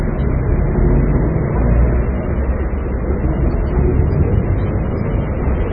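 A recording of sounds that shows likely MP3 compression damage throughout: nothing survives above 5 kHz, and heavy watery, swirling artefacts come from weak frequency lines dropping in and out between frames, which fits a very low bitrate around 16 kbps.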